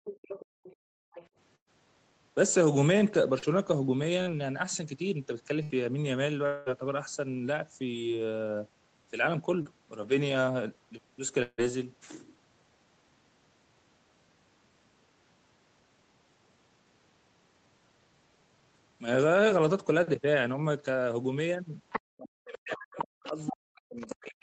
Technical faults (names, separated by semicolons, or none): other side's voice leaking through; background gated by the echo canceller; burst of packet loss; short concealed packet loss; long network dropout; speech suppressed in double talk